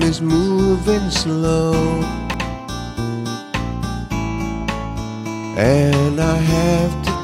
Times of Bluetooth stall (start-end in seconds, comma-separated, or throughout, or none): none